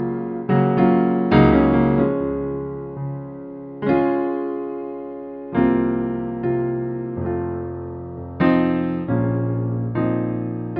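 Nothing stood out as a technical fault anywhere in the recording on listening.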